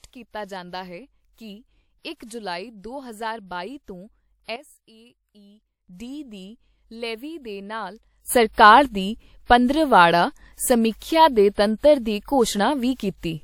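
A speech recording with two abrupt level changes and a run of smeared attacks. At 4.56 s the whole signal, voice and background noise together, drops by about 12 dB and stays down until 5.88 s, when it returns. At 8.28 s it jumps up by about 15 dB and holds there to the end. Each change is a sudden gain jump, likely a digital gain setting applied from one sample to the next with no ramp. On a waveform the envelope steps as a flat-edged block rather than tapering. Within the louder section, pre-echo precedes attacks at 8.53, 9.45, 10.96, 11.54, 11.77 and 12.94 s, spreading 33 to 59 ms ahead of each onset. A transform codec spread its quantisation noise across the whole block, so noise sized for each sharp attack also fills the quiet moment before it, heard as a brief hiss and a softened onset. A spectrogram shows a broadband smear just ahead of each transient instead of a clean vertical edge.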